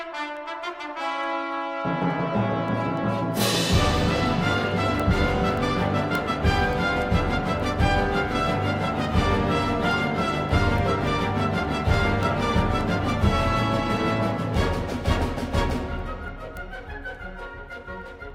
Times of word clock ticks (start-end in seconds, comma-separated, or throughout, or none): 0.37-18.30